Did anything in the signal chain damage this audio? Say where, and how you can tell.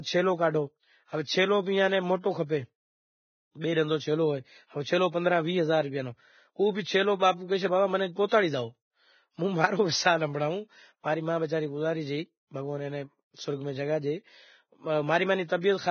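Yes, at the codec stage: throughout the speech, treble is grainy and hissy with a hard ceiling at 6.5 kHz on the spectrogram, which points to likely heavy Vorbis compression at roughly 16 kbps.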